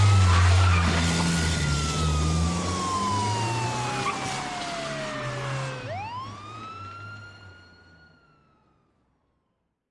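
Listening through the audio, nothing stood out as a technical fault at any point.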